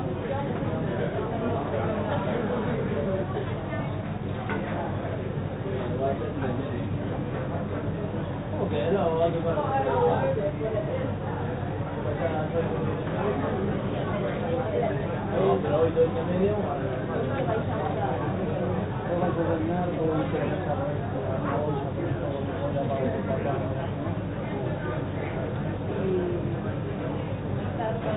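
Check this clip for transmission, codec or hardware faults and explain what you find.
Nothing here points to a fault: the audio comes through a call path whose content stops at about 4 kHz, which fits a narrowband G.711 mu-law link at around 64 kbps, and that band limit is simply how such a link carries sound.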